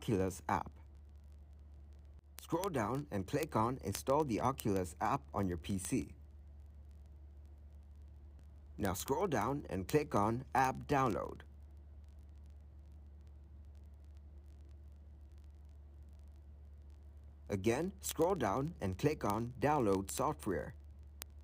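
Word clock ticks run through the audio from 0.11 s to 21.43 s. They are sharp clicks of uneven strength at a steady rate, roughly fifty per second, so about a thousand in all. The receiving device is running on its own clock, not locked to the digital source. The two clocks differ by roughly 0.1 percent. Each time they slip past each other, one sample is dropped or repeated and a tick results.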